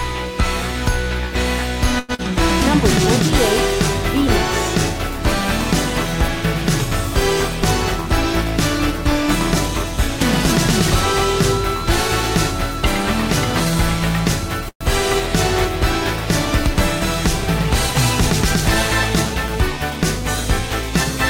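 At 1.99 s a sound is held too long, with a faint buzz, until 2.12 s. This is a short stall from a late packet. The jitter buffer ran dry, so the receiver stretched the last sound for 92 ms and then resumed where it had stopped, losing nothing.

Right after, from 2.15 to 2.22 s, comes a brief smear, a short concealed packet loss. About 60 ms of audio never arrived in time. The receiver bridged it with 39 ms of continued sound before blending back, trimming roughly 20 ms of delay and dropping some content.

Between 8.92 and 10.18 s the audio runs slightly faster at unchanged pitch. This is a jitter buffer speed-up at 103%: with excess audio queued, the receiver cut short pitch-period pieces repeatedly, removing around 50 ms.

At 14.68 s the last sound is continued and fades, goes silent for 70 ms, then picks up again at 14.84 s. This call audio freeze, 123 ms in all, was likely caused by packets held up in transit emptying the jitter buffer. 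Nothing is missing, only a gap inserted.

From 18.91 to 20.68 s a stronger jitter buffer speed-up, at 106%, makes the audio noticeably rushed while keeping its pitch. The receiver shed about 100 ms to pull the delay back down.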